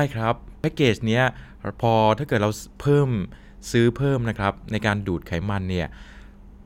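Dropped buffers at 0.64 s and 4.36 s: the speech skips ahead, losing about 30 ms and 10 ms, likely because samples were overwritten before being read.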